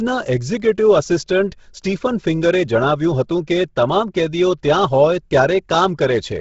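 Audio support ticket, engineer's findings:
Speech, throughout: breathy, grainy top end, nothing above 7.7 kHz. Grainy noise-filled highs rather than a clean low-pass point to likely Bluetooth LC3 compression at roughly 16 kbps.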